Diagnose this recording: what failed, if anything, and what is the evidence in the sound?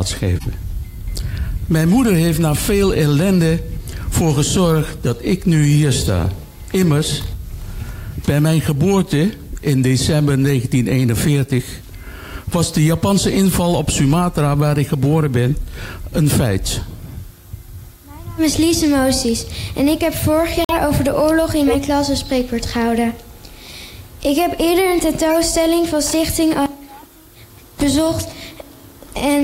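The codec stage failed. There are corrupt frames decoded at 0.36 to 0.46 s, 21.59 to 21.74 s and 25.30 to 25.36 s. Each is a short chirp or burst of noise lasting roughly two or three frame lengths. The first and last peak around -10 dBFS, and the one at 21.6 s is about 10 dB louder than those. Damaged bits were decoded as wrong gains and codes, which put energy at frequencies that don't belong there. A dropout would leave a gap, but these add sound.

A corrupt frame muted appears at 20.61 to 20.75 s. It is an abrupt hole of about 0.14 s of silence, which fits roughly three frame lengths. Here the decoder rejected the damaged frames and the player inserted silence in their place. Unlike the decoded corruption nearby, nothing spurious is added, and the sound simply stops. Timing after the hole stays intact, which separates it from a network or buffer dropout that would shift or skip the material around it.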